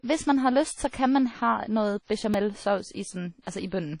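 Speech throughout, with a compression signature across the whole 4 s: the band stops dead at about 10.1 kHz, and the remaining audio has a ringing, washy quality with hiss that swells and fades with the signal. The codec damage is plainly audible and most likely comes from WMA compression at a low rate, around 32 kbps. At that rate the transform encoder zeroes weak spectral lines and spreads quantisation noise across long blocks, which accounts for both the hard top cut-off and the breathing noise floor. Pre-echo occurs twice. The first instance runs from 0.88 to 0.93 s, after "man har lyst så" and just ahead of "kan man". A short hiss of about 52 ms leads into the attack, which arrives softened. The second runs from 3.42 to 3.47 s, with about 49 ms of the same smear before the onset. In both cases a sharp transient landed late in a transform block, so noise sized for the loud part was spread back over the quiet stretch before it. 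At 2.34 s there is a repeated buffer: one short piece of about 2.67 ms plays a second time with hard joins, heard as a tiny click or buzz rather than a stutter. The length fits a 128-sample buffer being replayed once when fresh audio failed to arrive in time, and a few milliseconds of the original signal are lost at that point.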